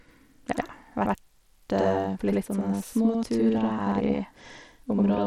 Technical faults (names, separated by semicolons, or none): channel delay (doubling); Bluetooth SBC compression